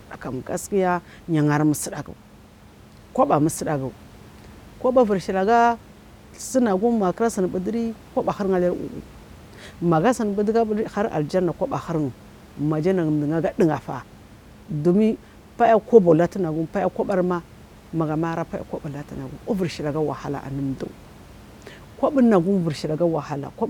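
No technical faults are audible.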